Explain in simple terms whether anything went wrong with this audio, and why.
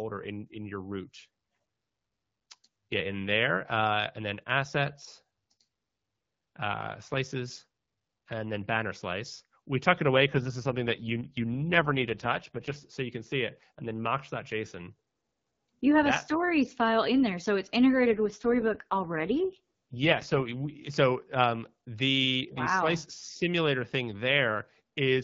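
Twice the sound turns rough and buzzy, like a robot. This is an AMR rate drop. The phone network squeezed the HD Voice call into fewer bits and used the rest to guard against errors on a weak link. The first drop runs from 10.30 to 12.87 s, right after "we tuck it away". The second runs from 18.10 to 20.72 s, after "in there so it's". Clarity returns at "so you can see" and "so um the wow".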